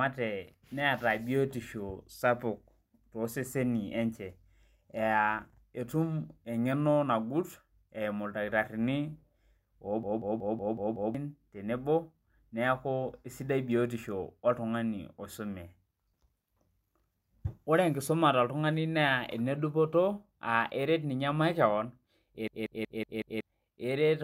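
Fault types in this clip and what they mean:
System hang loop: the system froze while the sound hardware kept replaying one ring buffer, so a single 186 ms slice of speech repeats exactly, about 5.4 times a second. That gives a machine-gun stutter from 10.03 to 11.15 s, just before "tenebo neeku sidai", and from 22.48 to 23.41 s. The loop length fits an 8192-sample buffer. Unlike a dropout, there is no silence; identical audio repeats while roughly a second of speech is lost.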